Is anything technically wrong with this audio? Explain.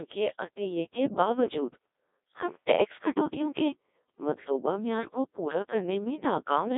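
Yes. Throughout, the speech carries Codec 2 vocoder damage. Only pitch, voicing, energy and spectral envelope survive, and the voice is resynthesised from sine waves. It sounds heavily buzzy and robotic, confined to 300 Hz to 3.7 kHz with nothing above 3.8 kHz, at a bitrate of 1.2 kbit/s.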